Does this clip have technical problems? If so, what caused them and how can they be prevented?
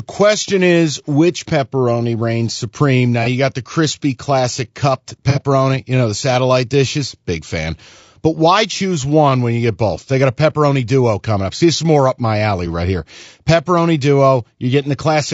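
Yes. Low-delay AAC compression runs through the whole speech clip. It is rough and grainy, with noise filling the gaps between pitch harmonics, which fits AAC-ELD at about 32 kbps. Unlike ordinary AAC, the short frames blur harmonics rather than pre-echoing transients. Encoding at a higher bitrate or with a longer-frame codec would prevent this likely cause.

AAC frame loss with concealment produces brief smeared, phasey patches at 3.23–3.28 s, 5.30–5.41 s and 11.57–11.61 s. The second patch is longer, fitting two lost frames rather than one. A plain dropout would leave silence, but here the decoder fills each gap with noisy, repeated spectrum. Forward error correction or a jitter buffer on the transport would prevent the losses.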